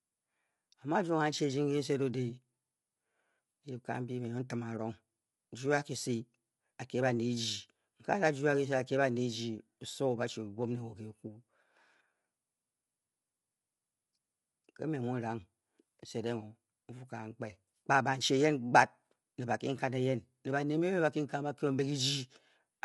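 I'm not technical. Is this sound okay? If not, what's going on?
No. From start to finish the speech sounds rough and grainy, with a hiss caught between the tones of the voice, and the brightest part of the sound stops at about 11.6 kHz, so it lacks sparkle. This is low-delay AAC compression, likely the kind used for video calls. It squeezes the audio in very short slices to keep delay low, which leaves too little detail to capture the voice cleanly.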